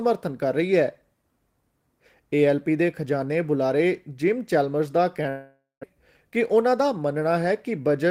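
A long network dropout hits this speech recording from 5.29 to 5.85 s: the last sound is stretched into a fading buzz, then about 180 ms of silence, and roughly 400 ms of speech never returns, likely from packets that stopped arriving. A jitter buffer speed-up follows from 5.93 to 7.29 s. The receiver trims short pitch-period slices to shed about a tenth of a second of built-up delay, so speech runs at 107% pace with unchanged pitch and sounds hurried.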